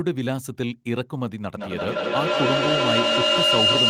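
A piercing tone near 3 kHz swells from 1.57 s to the end of the speech, with the loop repeating roughly every 150 ms and the tone peaking about 6 dB above the voice. This is feedback howl, from a microphone-to-loudspeaker loop gaining level on each pass.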